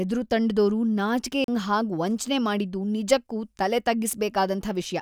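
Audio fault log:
1.44 to 1.48 s, CD skip: a tick and roughly 40 ms of silence, then the speech resumes from another turn of the disc rather than simply dropping out.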